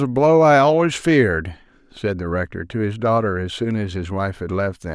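No technical fault can be heard anywhere in the speech. There is no moment in the recording that needs a time or an explanation.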